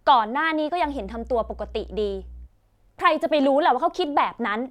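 From 0.81 to 2.49 s, mains hum appears: a steady 60 Hz tone roughly 20 dB below the speech, where a ground loop or nearby transformer coupled power-line current into the signal.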